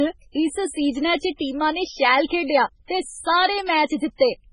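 Speech, and it's carrying MP3 compression damage all the way through, and heavily: nothing comes through above 10.5 kHz, and the weak detail keeps flickering in and out, giving that watery, swirly smear. That's likely a very low-bitrate MP3 encode starving the frames of bits.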